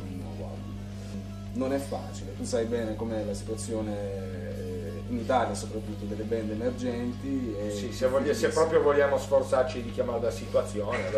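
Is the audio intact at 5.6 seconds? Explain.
No. Mains hum runs through the whole clip, including 5.6 s: a steady 50 Hz tone sitting roughly 10 dB below the sound, coupled in from the power line. A spectrogram shows a constant horizontal line at 50 Hz; the waveform carries a slow, even ripple.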